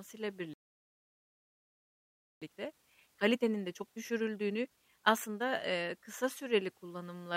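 At 0.54 s the speech cuts out mid-flow. This is a playback stall. Silence lasts about 1.88 s, until 2.42 s. The player likely ran dry of data or had its thread blocked. Then the speech resumes with "eee kısa süreli".

From 2.42 s to 5.42 s comes time-compressed catch-up. The player trims its backlog by dropping tiny slices and cross-fading the joins. Speech runs at 1.25 times normal speed, with unchanged pitch. Normal pace returns at 5.42 s.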